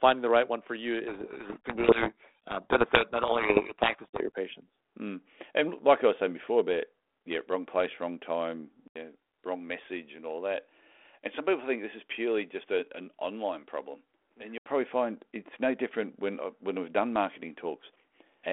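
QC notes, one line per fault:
1.08–4.29 s, codec payload misread: right after "right one for you" the speech is buried in harsh, grinding distortion until "patients mm and like". The G.726 code words are being read with their bits in the wrong order, so each sample's difference lands wrong and the adaptive predictor drifts into noise. On a spectrogram the band fills with dense broadband texture and the formant structure disappears. The waveform turns ragged and dense.
8.88–14.66 s, input switched to a poorer device: after "wrong place wrong time" there is an 80 ms gap, then the sound turns duller and about 5 dB quieter. Nothing passes above 3.8 kHz, and a faint new noise floor sits well below the signal. The likely cause is a change of input to a narrower-band microphone. The spectrogram shows a sharp top cutoff and a changed background from the gap onward. The waveform shows a dropout, then a lower envelope.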